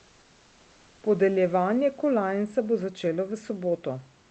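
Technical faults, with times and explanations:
0.00–1.03 s, comfort noise in place of the background: the opening background is a steady, featureless hiss about 2 dB quieter than the room noise that follows. The likely cause is the sender pausing transmission during silence while the receiver synthesises filler. The waveform shows a flat, even band, and a spectrogram shows a smooth, uniform texture without the room's fine detail.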